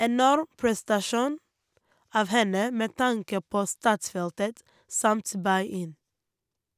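No technical faults can be heard anywhere in the recording: no dropouts, glitches or distortion.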